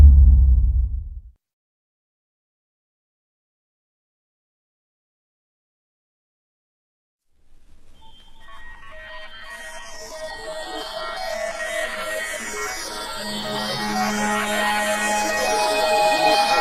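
From 6.01 s to 12.01 s the treble suddenly thins, with nothing above 12.3 kHz and stronger codec artefacts, then recovers without a gap. This is an adaptive stream at a lower bitrate, whose sound suggests a drop from roughly 96 kbit/s AAC to about 16 kbit/s HE-AAC while the connection slowed.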